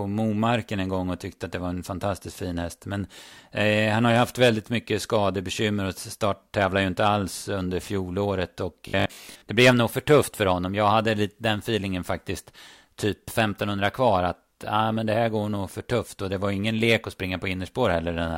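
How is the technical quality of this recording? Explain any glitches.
The recording has one glitch. From 8.88 to 9.44 s the speech turns into a rigid, metallic buzz near 50 Hz, which points to robotic sound from repeated short buffers. Audio likely arrived too seldom, so about half was filled by looping a 20 ms chunk.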